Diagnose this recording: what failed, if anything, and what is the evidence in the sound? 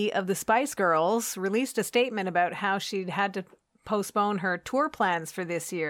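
Nothing failed here: no stage of the chain, from wiring through playback, leaves any audible evidence in this speech recording.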